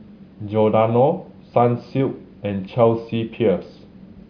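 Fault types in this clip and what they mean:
No fault types can be heard in the clip, so there are none to explain.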